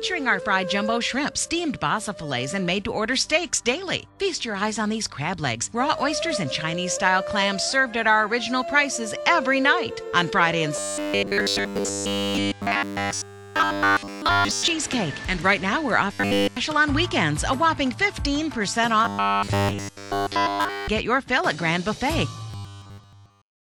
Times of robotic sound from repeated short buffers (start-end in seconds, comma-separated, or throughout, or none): 10.76-14.70, 16.13-16.57, 19.05-20.88, 22.51-23.80